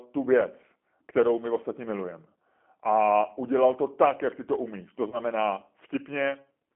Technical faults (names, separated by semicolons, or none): G.729 codec; VoIP packet loss concealed by the speech codec